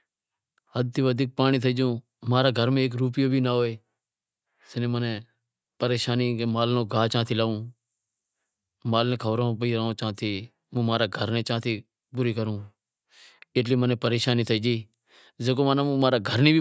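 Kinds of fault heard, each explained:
No technical faults are audible.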